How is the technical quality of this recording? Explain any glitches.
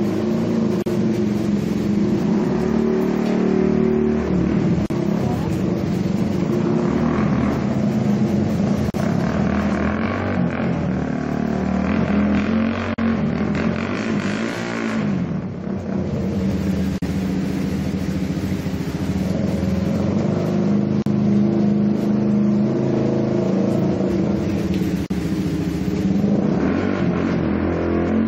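The recording is marred by a recurring dropout: the sound cuts to silence for about 40 ms at 0.82, 4.86, 8.90, 12.94, 16.98, 21.02 and 25.06 s, exactly every 4.0 s. Each break has smeared edges, and the audio resumes where it left off. This is a gap at a join of encoded pieces. The audio was encoded in 4-second segments and joined without trimming, so each segment's encoder start-up delay and final-frame padding remain as brief silences at every seam.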